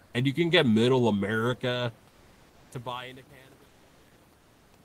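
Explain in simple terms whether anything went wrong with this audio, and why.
Near the start, from 0.05 to 0.13 s, the sender likely stopped sending sound during a pause and the receiver filled the gap with comfort noise in place of the background. For about 80 ms the room's natural background becomes a flat, featureless, slightly quieter noise.

From 2.06 s to the end, the fade-out that begins at about 2 seconds shows truncation distortion. The volume stage keeps too few bits, consistent with around 9 bits, and adds no smoothing noise. As the level drops, the sound turns gritty, worst from 2.44 s.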